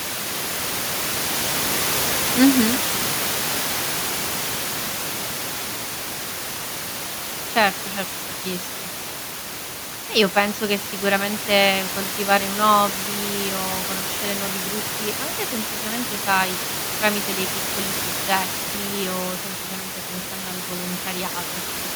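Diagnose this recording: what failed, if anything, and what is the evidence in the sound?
Nothing in the signal chain has failed in this speech recording. The background noise of the room sits about 9 dB below the speech and belongs to the recording itself.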